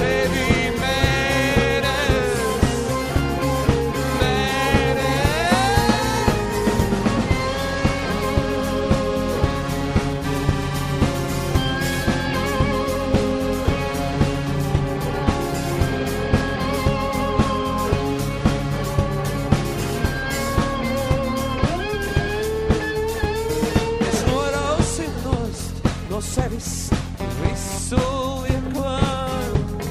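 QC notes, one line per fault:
No technical faults can be heard anywhere in the signal.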